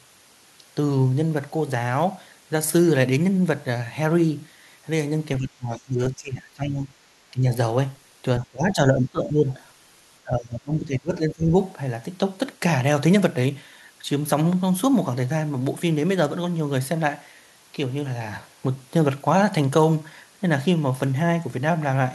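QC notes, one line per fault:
5.39–6.95 s, 7.31–7.48 s, 8.40–9.59 s, 10.22–11.54 s: speech suppressed in double talk. The talker's speech sinks by up to about 20 dB (about 10 dB in the brief 7.31 s dip). This is likely an echo canceller attenuating everything while both sides spoke. The waveform envelope caves in.
5.74–5.78 s: other side's voice leaking through. A faint scrap of a second voice, about 35 dB below the speech, slips past inside the first suppressed stretch, likely residual loudspeaker echo the canceller missed. It shows as a short smear of faint energy within the dip.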